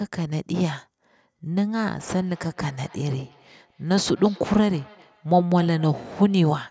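A speech recording with feedback echo between two devices, running from 1.93 s to 6.62 s. Each phrase returns about every 300 ms. The repeats sit low, peaking at about 27 dB below the speech. Two devices in the same room seem to share one call. One plays back what the other's microphone sent, and that microphone hears it again. Neither echo canceller removes the other device's output. The call's microphone processing leaves nothing above 8 kHz.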